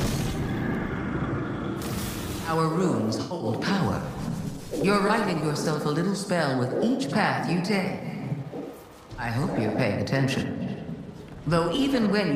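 At 3.21 to 3.46 s, 5.07 to 5.11 s and 11.74 to 11.79 s, corrupt frame concealment softens the sound into brief dips, as the decoder covers damaged frames, the first span pointing to several in a row. The waveform shows soft-edged notches; the spectrogram shows faded or smeared columns, timing intact.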